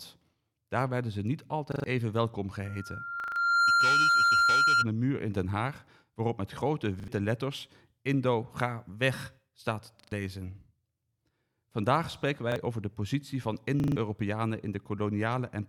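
At 1.72 to 1.84 s, after "werden ze niet", a repeated buffer makes the speech stutter. New audio arrived late, so the same 40 ms piece replays with hard joins, which points to a 40 ms buffer.

From 2.65 to 4.87 s, after "even welkom", a loudspeaker feedback squeal appears. The microphone re-amplifies its own loudspeaker at 1.4 kHz. That tone swells over about a second to about 10 dB above the speech. It stops before "de muur in".

Inside the squeal, at 3.2 to 3.36 s, the audio stutters again. More stutters follow at 7.0 to 7.08 s, 10.0 to 10.12 s, 12.52 to 12.56 s, and 13.8 to 13.96 s, after "over de positie van".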